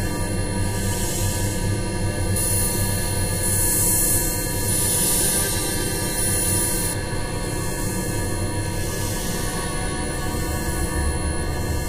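From about 2.36 s to 6.93 s, there's pre-emphasis left on. The treble boost applied before recording or transmission never got its matching de-emphasis cut, so the top end stays lifted by about 11 dB at 10 kHz relative to 1 kHz, a tilt that fits the FM 50 µs curve. You'll hear the sound turn thin and overly bright, with sibilance and high detail pushed forward, then settle back after 6.93 s.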